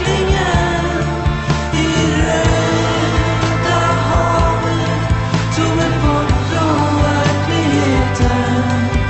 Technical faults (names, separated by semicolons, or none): none